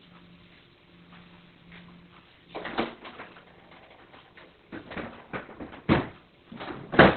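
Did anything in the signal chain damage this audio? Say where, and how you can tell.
Yes, at the codec stage: Opus compression, likely in its narrowband speech mode, makes the sound muffled and hoarse throughout, with nothing above 4.3 kHz. That fits roughly 12 kbps. It swirls less than MP3 would.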